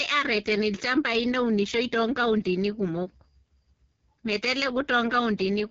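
From start to finish the speech sounds rough and raspy, with a buzzy, synthetic edge and hissy top, and nothing above about 7.6 kHz. This is the AMR wideband (HD Voice) codec under heavy strain, which fits its lowest 6.6 kbit/s mode.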